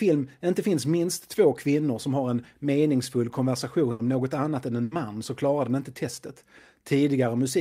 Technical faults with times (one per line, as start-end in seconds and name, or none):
3.91-4.02 burst of packet loss
4.83-4.94 burst of packet loss